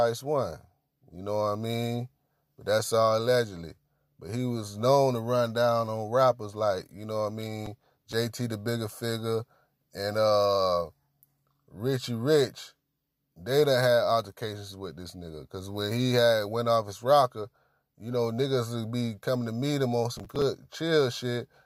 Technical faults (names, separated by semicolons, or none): processor overload crackle